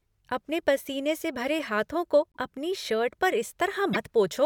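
At 2.32 to 2.37 s and again at 3.93 to 3.97 s, the speech skips forward and the next instant comes out as a brief garbled chirp, burst of noise or short hole. The likely cause is a broken MP3 bit reservoir: after missing 24 ms frames, later frames decode from the wrong bytes. A plain dropout would give clean silence instead.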